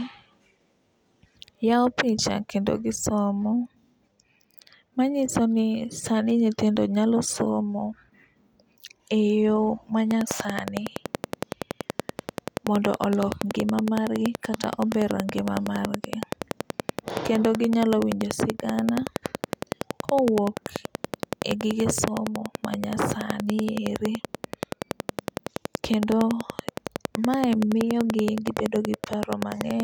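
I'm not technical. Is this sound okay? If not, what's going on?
No, not quite. From 10.11 s, right after "e yo", to 29.81 s there's a train of clicks: a steady ticking about 10.6 times a second, roughly 200 in all, over the speech and pauses. Likely from electrical interference or a faulty connection or power supply.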